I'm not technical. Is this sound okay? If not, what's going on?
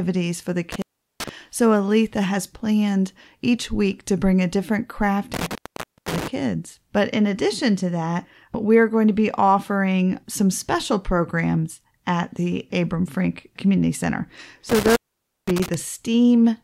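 No, it isn't quite right. The speech drops out three times because of an intermittent contact: a loose plug or cable briefly loses its connection, so the sound vanishes with a little crackle as it cuts out and comes back. It happens after "for the" around 0.72 s (gone for roughly 0.38 s), after "bring a different craft" at 5.34 s (about 0.53 s), and again at 14.69 s (about 0.51 s).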